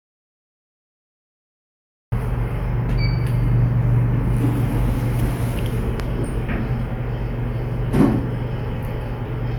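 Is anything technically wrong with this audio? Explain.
Yes. There's an audio dropout to silence from the very start until about 2.12 s: the input was already cut when the clip begins, likely from a lost connection or mute, so the recorder wrote silence, with no room tone at all, before the sound abruptly kicks in.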